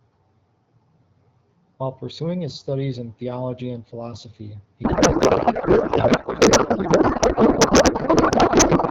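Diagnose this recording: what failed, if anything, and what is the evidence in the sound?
Codec payload misread: AMR frames packed octet-aligned were unpacked as bandwidth-efficient, so from 4.83 s, after "theology and philosophy he", speech dissolves into garbled warble.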